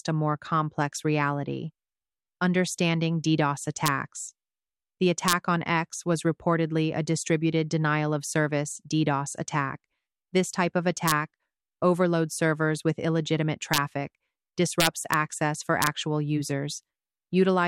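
Integer overflow cracks break through the sound six times: 3.86–3.88, 5.28–5.33, 11.08–11.12, 13.74–13.78, 14.80–15.14 and 15.82–15.87 s. On each loud peak the level goes only about 0 to 2 dB past full scale, but instead of being capped it wraps to the opposite extreme. That's why you get a harsh snap rather than ordinary clipping fuzz. The longest run, around 14.8–15.1 s, is also the most overdriven, at about 2 dB.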